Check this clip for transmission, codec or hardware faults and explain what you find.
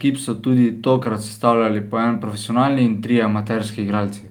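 Nothing in the speech points to a transmission, codec or hardware fault.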